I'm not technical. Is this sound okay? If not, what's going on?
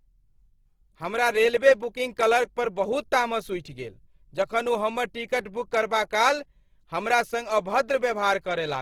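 No. Throughout the whole recording the speech sounds grainy and rough, with a hiss clinging to it. This is Opus compression, likely squeezed hard: the encoder keeps each band's overall loudness but patches missing detail with noise or copied sound.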